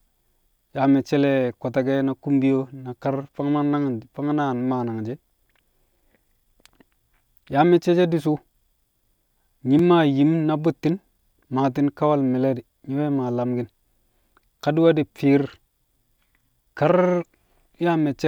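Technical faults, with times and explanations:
9.79 s, repeated buffer: right before "maa yim na bu̱tti̱n" there's a tiny click. New audio arrived late, so the device replayed its last 2.9 ms block once, which fits a 128-sample buffer. That's too short to hear as a stutter, and practically nothing is lost.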